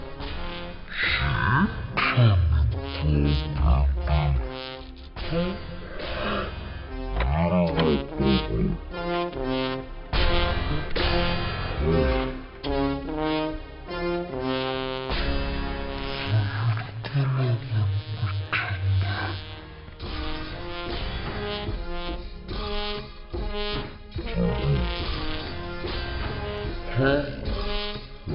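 Throughout the clip the audio is drastically slowed and deepened, running at one third of its proper speed with its pitch lowered by 19 semitones, more than an octave and a half, so everything drags and sounds cavernous. This is a wrong sample rate fault: the samples are being played back without conversion at a rate three times lower than the recording rate, which fits 48 kHz material played at 16 kHz.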